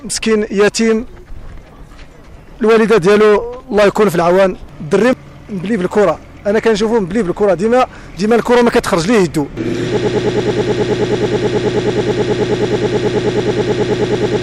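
At 9.97 s a broken-record loop begins and runs to the end of the clip. A fragment of about 107 ms repeats exactly, back to back, 42 times. It sounds like a rapid, mechanical stutter with a steady pulse near nine repeats per second. The player, encoder or stream likely stalled and kept resending the last fragment it held. Whatever audio belonged in those final seconds is gone.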